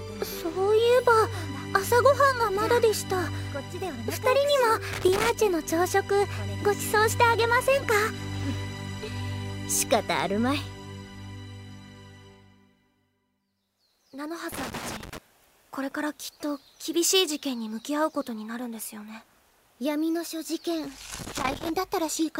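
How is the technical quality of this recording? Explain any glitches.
The recording has one recurring problem: loose connector crackle, which breaks in three times. The bursts run from 4.93 to 5.30 s, 14.52 to 15.18 s, and 21.15 to 21.70 s. Each time, a worn or dirty contact is flickering between touching and not, so the audio gets chopped and any DC on the line adds little pops. That comes across as a short, ragged scratch over the sound.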